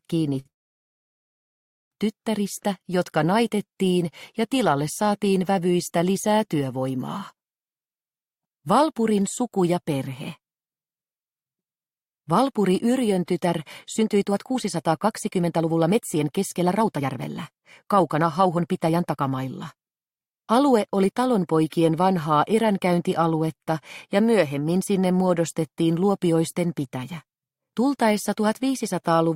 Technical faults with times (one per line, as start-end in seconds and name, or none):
0.39-0.47 short stall from a late packet
0.49-1.93 call audio freeze
13.40-21.13 jitter buffer speed-up